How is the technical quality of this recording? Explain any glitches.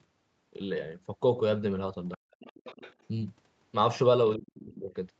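The recording has two kinds of call-processing glitch, both concentrated in two short moments. The band stops at 8 kHz, which points to a wideband Opus call path.

Other side's voice leaking through, from 2.11 to 2.94 s and briefly from 4.48 to 4.52 s, is a faint second voice, about 25 dB and then about 35 dB below the talker. It is likely residual loudspeaker echo the canceller missed. On a spectrogram it appears as weak, thin harmonic traces under the main speech.

Speech suppressed in double talk affects 2.17 to 2.23 s and 4.36 to 4.91 s. The talker's level dips, by up to about 40 dB in the brief first drop and about 30 dB across the half-second second one. This is likely the canceller ducking everything while both sides spoke. The waveform shows sudden envelope notches, and the spectrogram shows darkened gaps.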